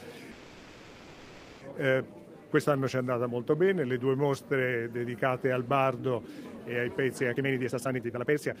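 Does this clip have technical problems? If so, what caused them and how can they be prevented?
Yes. From 0.31 to 1.63 s the last sound is held as a fading buzz or hiss for about 1.3 s, then the audio resumes exactly where it stopped. This call audio freeze was likely caused by delayed packets draining the jitter buffer. A steadier network path and an adaptive jitter buffer would prevent it.

From 7.34 s to the end at 8.6 s, the audio rushes at about 177% speed with unchanged pitch. This jitter buffer speed-up comes from an overfull buffer: the receiver cut many short pitch-period pieces, roughly a second in total. Smoother packet delivery and a gentler catch-up rate would prevent it.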